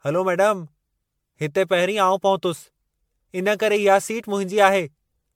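Throughout the speech, the sound has the swirly, hollow smear of generation loss, most likely from being run through MP3 encoding around ten times in a row. Each pass requantised on a shifted frame grid, so noise and spectral gaps piled up and consonant attacks lost their edges. What separates this from one low-bitrate encode is the degree: the damage is heavier than a single pass near 100 kbit/s would leave.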